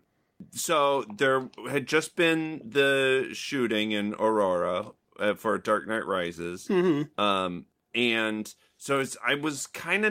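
No technical faults are audible.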